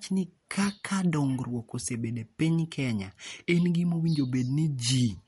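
Throughout the speech, the sound is watery and swirly, s sounds chirp metallically, attacks are smeared, and nothing sits above 11.2 kHz. The likely cause is MP3 compression starved of bits, fitting about 48 kbps, so the encoder cut the treble and let weak frequency lines flicker.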